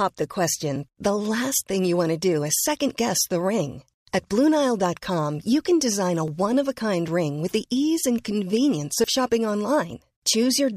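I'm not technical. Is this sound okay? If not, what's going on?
No. There is a dropped buffer, or overrun, at 6.28 seconds, just before "one of a". You hear the speech jump forward slightly, with no gap or pause. The likely cause is that the recording program fell behind for a moment, so the equipment wrote new sound over a small piece it hadn't saved yet. Roughly a fiftieth of a second went missing, and the sound on either side was joined directly.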